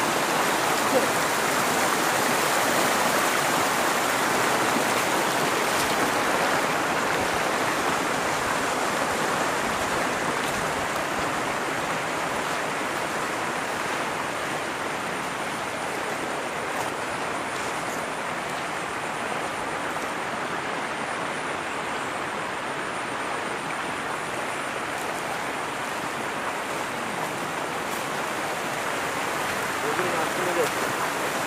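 Nothing here catches the ear as a technical problem; the audio just runs along from beginning to end without any glitch, dropout or odd artefact worth pointing out.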